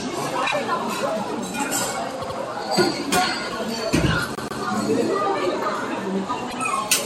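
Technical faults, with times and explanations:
0.46–0.53 s, 2.21–2.37 s, 4.35–4.61 s and 6.49–6.57 s, repeated frames: blocks of 26, 78, 131 and 78 ms replay twice, twice, twice and once, a stutter. The shortest block fits one compressed frame, and each repeat lengthens the sound.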